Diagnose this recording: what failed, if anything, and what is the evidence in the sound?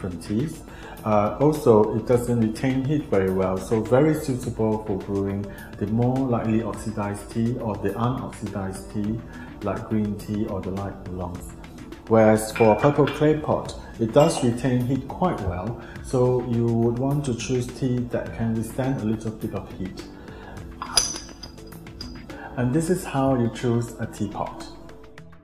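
Nothing failed at any stage: the sound gives no evidence of a fault anywhere in the chain.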